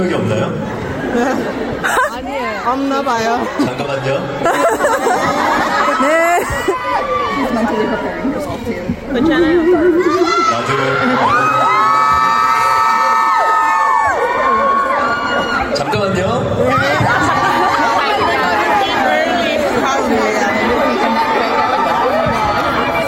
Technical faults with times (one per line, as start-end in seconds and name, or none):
none